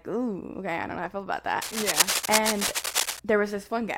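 From 1.62 to 3.20 s, cable scratch noise rustles over the speech at roughly the same loudness, likely from a worn connector being moved. Its dense, uneven bursts cluster during handling, unlike steady hiss or evenly scattered clicks.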